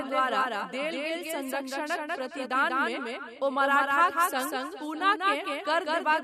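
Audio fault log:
throughout: doubled audio track. A second full-band copy of the speech trails the original by about 200 ms at roughly equal loudness, dry and without room colour, giving a hard flam on every syllable. The likely cause is a slower second capture path mixed back in.
throughout: echo with no canceller. A further return arrives roughly 400 ms behind the speech, about 15 dB down, thinner than the direct sound. This fits a far-end loudspeaker feeding its microphone, with nothing cancelling the network round trip.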